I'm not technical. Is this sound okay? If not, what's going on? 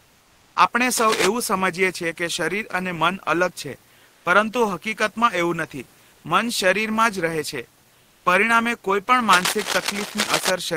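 No. During the pauses at 0.00 to 0.55, 4.09 to 4.25, 6.13 to 6.23 and 8.01 to 8.25 seconds, comfort noise replaces the background: a smooth, featureless hiss stands in for the real room sound, likely because the sender stops transmitting whenever nobody talks. Unlike ordinary room noise, it has no detail.

At 0.97 to 1.28 seconds and 9.33 to 10.50 seconds there is cable scratch noise, rough uneven scratching over the sound, likely from a worn cable or connector being moved. Unlike the steady hiss, it comes in jagged bursts.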